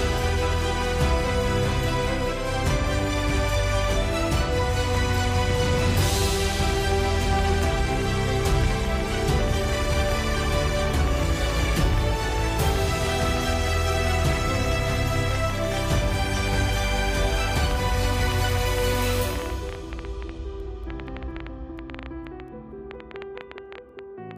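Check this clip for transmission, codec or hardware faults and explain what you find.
One hardware-type fault is present. From 4.95 s to 24.32 s there is a train of clicks at about 9.2 per second, irregularly spaced, around two hundred in all and peaking a few dB above the sound. The likely cause is electrical interference or a struggling interface injecting similar pulses. They are heard as uneven ticking, and on a spectrogram they appear as thin vertical broadband lines, or as sharp spikes in the waveform.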